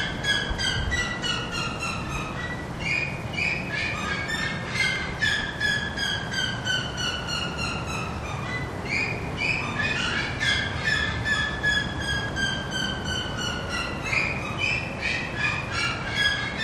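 Four sharp, isolated clicks land at 1.24, 4.96, 8.18 and 15.91 seconds, each a thin vertical line across the spectrum. They likely come from dropped samples: a fraction of a millisecond goes missing, so the waveform jumps abruptly without audibly removing any sound.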